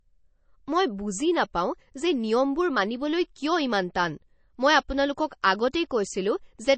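Throughout, the speech sounds watery and swirly, with nothing above 8.3 kHz. This is likely MP3 compression at a low bitrate near 32 kbps, dropping treble and weak detail.

After "ইমান টান মই আপোনালোকক", pre-echo appears at 5.42 s and 5.72 s. Codec noise spreads before each sharp onset, leaving a brief hiss and softened attack.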